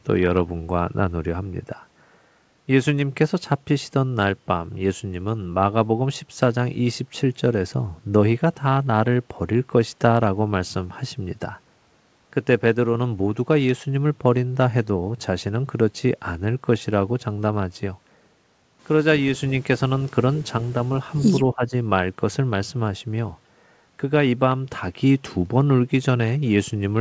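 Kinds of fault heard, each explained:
Speech suppressed in double talk: from 21.53 to 21.73 s the speech dips about 15 dB, likely echo-canceller ducking during overlap. It is attenuated, not cut to silence like packet loss.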